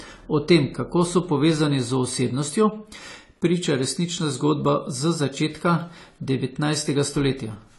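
From start to finish the speech sounds dull and smeared, with a fizzy, warbling edge on sibilants, and nothing reaches above 11.5 kHz. A spectrogram shows a hard, flat ceiling there. This plainly audible damage is likely AAC compression (AAC-LC), and fits a low bitrate around 32 kbps.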